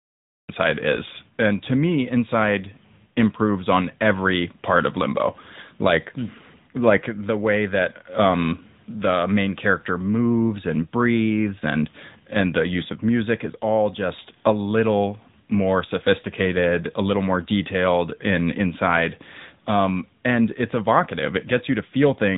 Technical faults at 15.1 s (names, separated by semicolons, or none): AMR narrowband mobile codec